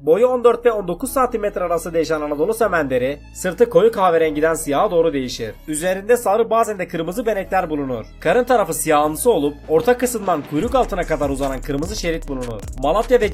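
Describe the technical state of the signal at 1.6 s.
At 1.6 s the signal is intact, with no technical fault audible at that moment.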